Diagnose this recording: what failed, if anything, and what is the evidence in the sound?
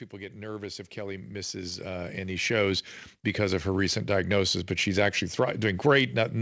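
In the call-processing stage, automatic gain rising: the gain control judged the input too quiet and raised it steadily, by about 15 dB, from 0.11 to 3.94 s, just before "diagnosis but she's actually". Speech and background swell together; the band stops at 8 kHz, consistent with a wideband call codec.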